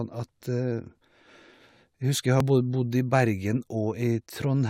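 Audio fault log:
2.40 s, overlap between stream segments: two adjacent stream segments carried overlapping timestamps, and the player trimmed the supposed duplicate, discarding about 11 ms of speech that was never actually repeated. The waveform jumps across the gap, producing a brief click or tiny skip.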